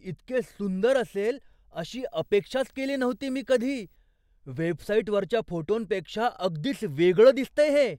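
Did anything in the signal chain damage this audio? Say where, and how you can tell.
Yes: from 1.96 to 3.96 s, just before "वेबसाईटवरच्या फोटोंपेक्षा", a faint 59.94 Hz buzz with hash and a 15.7 kHz whine shows video or display buzz coupling into the analogue wiring.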